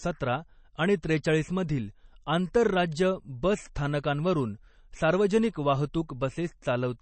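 From start to end the speech sounds watery and swirly, with metallic chirping on s sounds and smeared attacks, and nothing is left above 8.3 kHz. This is likely MP3 compression, at a level of damage that fits a bitrate around 32 kbps. Short of bits, the encoder cut the treble at a fixed point and zeroed weak frequency lines, which flicker on and off between frames and cause the swirling.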